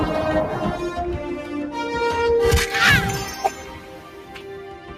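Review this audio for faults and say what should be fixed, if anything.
A noise suppressor built for speech was left running on non-speech material. It reads steady tones, ambience and decays as noise and keeps pulling them down, so the level swings by roughly 10 dB across the whole clip. Sharp onsets make it through while anything sustained sinks behind them, which gives the sound a pumping, fluttering quality and thins out held parts and tails.

From 3.77 s to the end, the noise suppressor cut the sound harder than elsewhere, taking it down by up to about 5 dB. The suppressor mistook the sound in this stretch for noise, so it gets turned down.

To prevent both, bypass the speech noise suppressor, or switch it to a music mode, whenever the input is anything other than speech.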